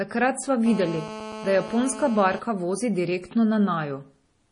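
From the very start and all the way through, the speech has a watery, swirly quality, with metallic chirping on the s sounds and consonant attacks that smear. Nothing comes through above 10.6 kHz. That hard treble ceiling plus the flickering texture is likely MP3 compression at a very low bitrate, something around 32 kbps. The encoder ran short of bits, so it chopped off the top end and kept dropping weak frequency lines in and out from frame to frame.

At 0.66 s a hard, raspy buzz cuts in and runs steadily until 2.39 s, ending just before "vozi direktno". That's GSM phone buzz. A 2G handset nearby was on a call, transmitting in bursts about 217 times a second, and the audio circuitry rectified those radio pulses into a 217 Hz tone full of harmonics. It sits about 12 dB below the speech and has no relation to it.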